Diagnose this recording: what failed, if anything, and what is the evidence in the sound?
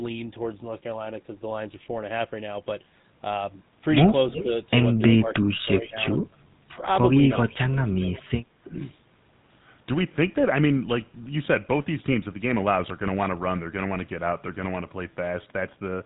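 The codec stage is the GSM full-rate coder, applied across the whole recording. It models the vocal tract and excites it with a sparse, regularly spaced pulse train, discarding most of the excitation detail, which fits a 13 kbps full-rate link. The result is a plainly audible buzzy, gravelly roughness on every voiced sound. The band stops at 3.9 kHz, so sibilants and breath sound dull and clipped.

In call processing, the echo canceller's double-talk handling likely failed between 7.38 and 8.82 s. With both ends active, it could not tell the near talker from loudspeaker return, so it attenuated the near talker's signal along with the echo. Within that window the speech dips and thins in patches adding up to around 0.7 s, with the deepest dips near 10 dB, so the level sags in and out rather than holding steady.

An echo leak from the loudspeaker end is also heard within that same stretch, at 7.48–7.54 s and again at 8.13–8.22 s. 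The loudspeaker end's microphone picked up its own loudspeaker output, and the canceller there likely let a residue through. That residue returns as a faint delayed copy of the voice, roughly 350 ms behind the original. Both scraps are brief fragments sitting far below the direct speech.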